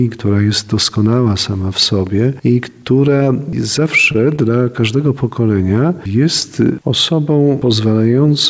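At 4.12 to 4.16 s and again at 4.36 to 4.39 s, a packet arrived late and the jitter buffer ran dry, causing a short stall from a late packet each time. The receiver stretched the last stretch of sound by about 27 ms until the packet turned up, then resumed where it left off, so nothing is lost. Each sound is held slightly too long, with a slight buzz or dip, over band-limited audio that stops at 8 kHz, consistent with G.722 coding.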